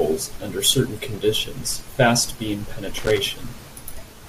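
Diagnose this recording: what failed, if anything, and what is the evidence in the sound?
A loose connector in the analogue wiring failed: a worn or dirty contact opened and closed rapidly as it shifted, chopping the speech signal. Right after "certain conditions fast beam", from 2.98 to 3.19 s, about 0.21 s of irregular crackle and scratching breaks over the audio. Each momentary break in contact interrupts the signal, and any DC on the line turns those interruptions into pops, which is the loose connector crackle heard here.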